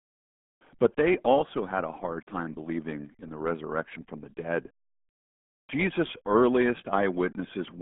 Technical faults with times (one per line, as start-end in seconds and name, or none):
0.00-7.82 RealAudio 14.4 codec